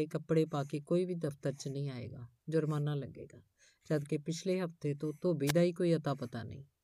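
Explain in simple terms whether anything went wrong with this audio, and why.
A wireless microphone noise hit occurs from 5.46 to 5.52 s: the radio signal briefly faded, so receiver static swished over the speech for a split second.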